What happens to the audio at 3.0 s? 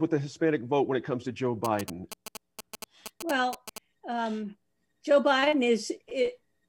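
At 3.0 s the speech is overlaid by GSM signalling bursts, running from 1.65 to 3.78 s: a nearby phone's radio pulses, rectified by the audio circuit, give a galloping ticking buzz at 217 Hz, somewhat below the speech level. A spectrogram shows clustered vertical stripes with harmonics stacked above 217 Hz.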